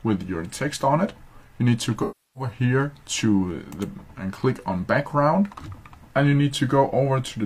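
From 2.02 to 2.51 s, AAC frame loss with concealment occurs. Roughly 0.34 s of frames vanish. The decoder rebuilds from the last good spectrum, leaving a smeared, fading patch.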